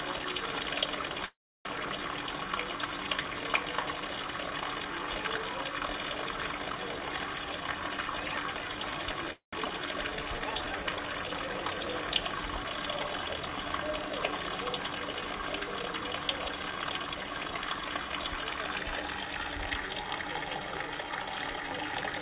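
From 1.26 to 1.67 s, packets were likely held up and the jitter buffer ran dry. The receiver stretched the last sound into a brief fading buzz, then about 0.31 s of silence, before the sound resumed where it stopped. This call audio freeze adds 0.39 s of delay and drops nothing.

From 6.89 to 9.14 s, the jitter buffer held more audio than its target. A jitter buffer speed-up trimmed short slices repeatedly, removing roughly 0.4 s. The sound plays at 117% speed at unchanged pitch and feels hurried.

From 9.33 to 9.55 s, a second freeze follows the same pattern. There is a short fading tail, about 0.13 s of silence, and 0.2 s of delay inserted.

From 9.65 to 9.67 s, audio was discarded while later packets were already queued. The skip ahead jumps past roughly 0.1 s of sound, and the two sides are joined almost seamlessly.

From 10.04 to 10.96 s, the buffer was rebuilding its reserve. A jitter buffer slow-down repeated tiny segments, adding 124 ms. 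The sound runs at 87% speed, drawn out.

From 16.34 to 17.95 s, a second speed-up runs at 112% and removes roughly 0.2 s. Throughout, nothing is heard above 4 kHz, consistent with a narrowband call codec.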